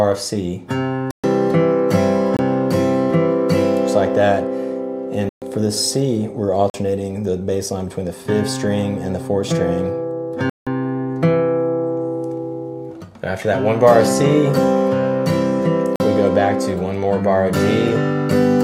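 Six blocks of digital silence break the sound: 1.11–1.24 s (128 ms), 2.37–2.39 s (22 ms), 5.29–5.42 s (128 ms), 6.70–6.74 s (43 ms), 10.50–10.67 s (171 ms) and 15.96–16.00 s (43 ms). Each time the output drops straight to silence and returns with no fade. The 43 ms gaps fit a 2048-sample block left unfilled in time.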